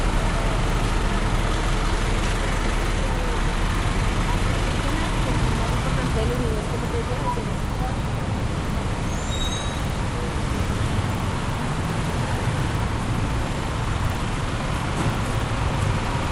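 From start to finish, a steady ticking runs under the sound at 20 per second, heard only while there is signal and dropping away in the silences. This is a resampler restarted on every block. The pattern fits 50 ms blocks being converted one at a time, likely from 24 kHz up to 48 kHz, with the filter seeing no true neighbouring samples at each block edge. Each boundary therefore carries a small error, and these repeat as the regular tick.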